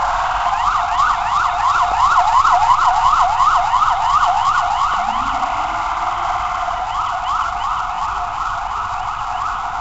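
Throughout, the sound carries a rough, hissy halo and a smeared, underwater blur, with nothing above 7.8 kHz. This is likely Nellymoser compression, which fits a 32 kbps Nellymoser Asao stream: quiet bands get no bits and are filled in with noise.

At 1.92 s and again at 4.94 s, a brief click or stutter interrupts the sound. These are overlapping chunks. The audio was handled in 3-second pieces, each starting 20 ms before the previous one ended, so that 20 ms plays twice at each join.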